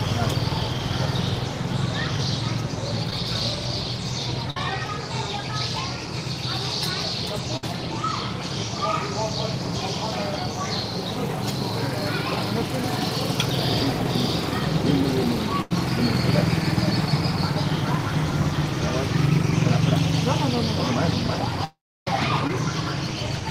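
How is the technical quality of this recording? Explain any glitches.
The recording has network-related glitches: two short concealed packet losses, three bursts of packet loss and one long dropout.

Short concealed packet loss occurs at 3.10–3.12 s and 22.47–22.50 s. Roughly 10 ms of audio never reached the decoder, so the receiver extended the preceding sound across the hole and blended back in. Each is heard as a brief smear or wobble.

Bursts of packet loss occur at 4.50–4.57 s, 7.57–7.64 s and 15.62–15.71 s, losing about 50, 60 and 90 ms respectively. Several consecutive packets failed to arrive in time. The receiver continued the last sound while fading it, giving a short held buzz or dwindling hiss before the audio resumes slightly further on.

At 21.64–22.07 s the audio stretches into a fading buzz or hiss, then falls to silence for about 310 ms, and resumes with roughly 420 ms missing. 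This is likely a long network dropout, with concealment filling the start of the gap before giving way to silence.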